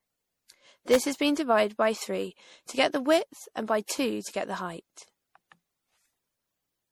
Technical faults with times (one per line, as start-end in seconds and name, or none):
0.00-6.92 generation loss
0.94 electrical switching spike